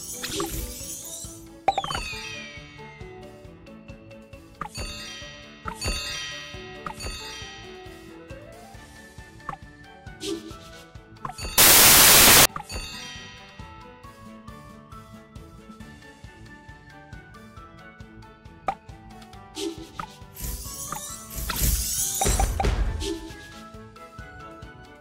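From 11.58 to 12.45 s the audio bursts into loud, harsh broadband noise, a case of samples built from the wrong bytes: byte order or alignment slips, so rapidly changing low bits dominate each value. The waveform shows a dense, high-level block there, and the spectrogram a flat broadband smear.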